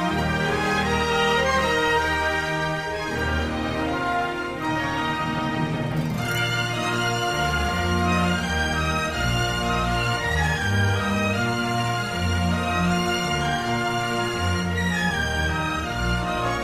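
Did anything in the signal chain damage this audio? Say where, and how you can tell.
No, nothing in the signal chain stood out as a problem on listening.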